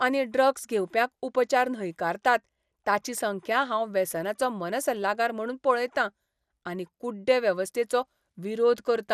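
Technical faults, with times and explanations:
Throughout: MP2 compression, likely at a low rate around 80 kbps. The speech sounds dull and gurgling because bit-starved sub-bands are coarsely quantised and flicker on and off. A spectrogram shows a hard ceiling at 14.4 kHz and blocky, intermittent patches in the upper bands.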